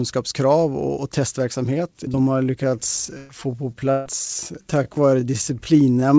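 At 2.12 to 2.15 s there is a short concealed packet loss: about 20 ms of the call never arrived, and the receiver bridged it by extending the preceding sound before blending back. It is heard as a brief smear or wobble. On a spectrogram, harmonics run unnaturally flat across a thin sliver, with the G.722 path's empty band above 8 kHz visible throughout.

From 2.28 s to the end, the pace suddenly slows to about three quarters of normal while the pitch stays put, so the speech drags. This is likely a time-stretched section, where software repeated short pieces to lengthen the audio. A spectrogram shows the events drawn out in time with unchanged harmonic spacing.

Two bursts of packet loss follow, at 3.17 to 3.31 s and 3.91 to 4.07 s, removing about 120 ms and 140 ms of audio. Each time, the last sound is held as a fading buzz or hiss, then the audio resumes further on. On a waveform, the envelope decays smoothly across each gap. 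On a spectrogram, frozen, dimming harmonics end in an abrupt jump.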